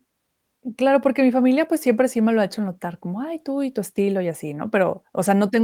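No faults detected in this speech clip; the Opus voice compression running in hybrid mode at 24 kbps leaves only light coding traces and keeps the full band.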